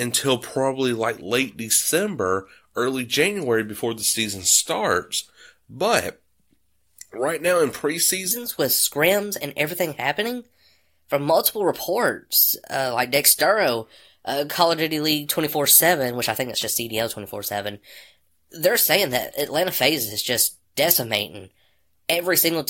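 A section at the wrong speed runs from 8.31 s to the end of the clip. At that point the speech suddenly plays about 1.23 times faster than it was recorded, and pitch and tempo rise together by roughly four semitones. Voices turn noticeably higher and more hurried, with compressed pauses. The likely cause is that this part was resampled or played back against the wrong clock rate.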